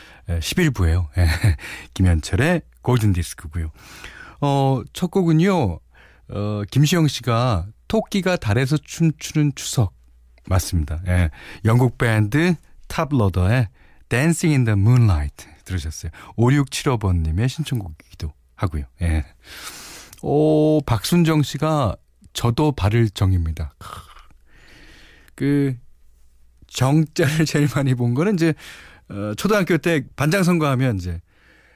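Nothing stood out as a technical fault on listening to this speech recording.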